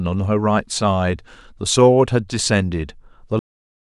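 At 3.39 s the speech stops abruptly mid-sound and falls straight into digital silence for the remaining 0.6 s, with no natural decay. This is a cut-off end: the final buffers of audio were never written or played back, so the recording simply ends early.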